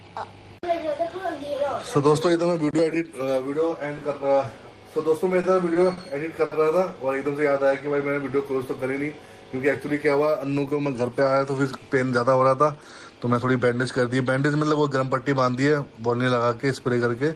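Between 5.41 and 6.54 s there are four short stalls from late packets, at 5.41, 5.73, 5.93 and 6.45 s. Each time a packet was late, the jitter buffer ran dry and the receiver held the last sound in place: 20, 20, 40 and then 60 ms. Nothing is skipped, so each one sounds like a brief hitch or smear. On a spectrogram, each stall shows as a short stretch of frozen, flat harmonic bands. The waveform shows a repeating pattern there, and the timeline after each one is pushed later by the same amount.

From 7.40 to 8.09 s a jitter buffer slow-down adds 64 ms by repeating single pitch periods or bits of pauses many times in a row. This lets the receiver rebuild its reserve. The audio plays at about 92% speed with unchanged pitch, so the sound is drawn out. In the waveform, cycles repeat almost identically. The spectrogram shows the same harmonic spacing spread over a longer span.

From 10.10 to 10.59 s the opposite happens: a jitter buffer speed-up. 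The buffer held more than its target, so the receiver cut out pitch-period pieces, around 70 ms in total, and the audio runs at about 112% speed. Pitch stays the same, but the sound feels hurried and clipped. The spectrogram shows features squeezed closer in time with no shift in frequency. The waveform shows short cycles joined at the points where pieces were dropped.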